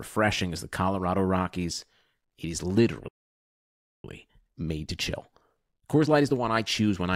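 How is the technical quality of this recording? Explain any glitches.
The speech has two linked glitches: a dropout and then a rushed stretch as the player makes up lost time.

At 3.08 s the sound cuts out in mid-flow and stays silent until 4.04 s, just under a second. That's a playback stall, likely from the player running dry of data or its thread getting blocked, so output simply stopped until it recovered.

From 4.04 s to 7.04 s there's time-compressed catch-up: the player trims its backlog by removing short slices and cross-fading the joins. The speech runs about 1.1 times fast but keeps its normal pitch, so it just sounds hurried.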